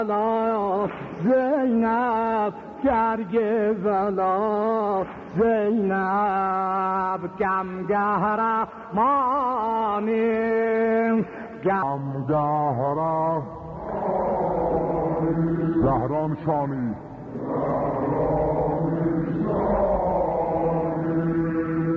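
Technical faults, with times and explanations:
11.83 to 21.96 s, wrong sample rate: from about 11.8 s to the end, everything drops and drags together, running at roughly 0.73 times normal speed and sitting about 5.5 semitones lower. Because pitch and tempo shift by the same ratio, the samples are being clocked out slower than they were captured, with no conversion in between. That ratio fits audio recorded at 22 kHz and played back at 16 kHz.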